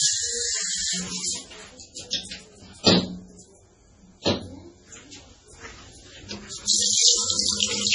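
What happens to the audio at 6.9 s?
At 6.9 s the audio carries the same dull, smeared quality it has throughout: nothing above about 10.4 kHz, with swirly, watery artefacts, which points to low-bitrate audio saved at a high bitrate, likely a very low-rate MP3 later re-encoded around 192 kbit/s. A spectrogram shows a flat ceiling at 10.4 kHz.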